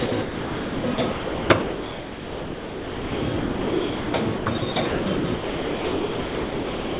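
From 0.06 s onward the sound repeatedly drops to flat hiss, likely sound chopped by the voice detector, with comfort noise filling 5.56 s. The waveform shows featureless noise blocks between bursts.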